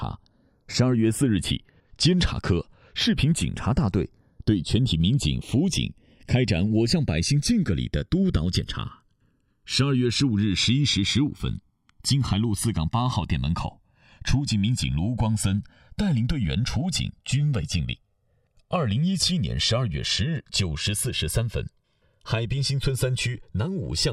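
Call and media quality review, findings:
Channels drifting apart, whole clip: left and right captured on separate clocks roughly 100 ppm off, inter-channel delay creeping to around 2 ms. Mono sum shows slow flanging as comb notches sweep.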